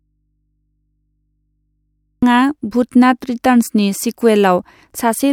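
Until 2.23 s, an audio dropout to a faint residue leaves only mains hum, about 55 dB down, likely from a lost feed into a live input.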